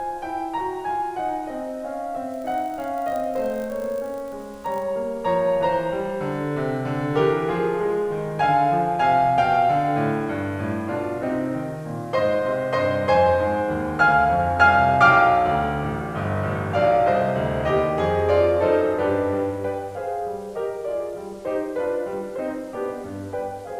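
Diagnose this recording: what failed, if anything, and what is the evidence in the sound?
The whole piece of music carries a grainy, signal-following distortion, sitting roughly 30 dB below the music and getting grittier as passages thin out. That's low bit depth without dither, likely a sample-format conversion that rounded down to about 8 bits with no dither to decorrelate the error.

From 2.32 to 4.85 s there's a 50 Hz buzz that rises and falls with the music's level: a filter restarted on every block. Some processing stage is dropping its filter state each block, so every 20 ms block opens with a small transient.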